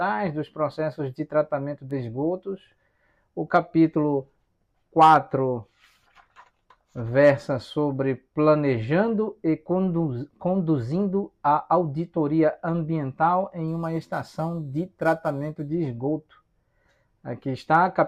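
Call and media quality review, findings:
13.68–15.68 s: gritty inharmonic fizz riding the louder, brighter sound, error roughly 30 dB down. Crude rate conversion, sounds like 44.1 to 48 kHz via nearest-sample repeats, no filter.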